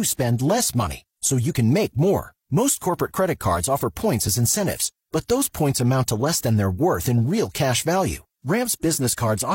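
At 4.28 s a tiny skip breaks the speech, as about 31 ms of sound goes missing and the waveform jumps. This is an overlap between stream segments: two 2-second segments claimed the same time span, and the player trimmed audio that was never actually duplicated.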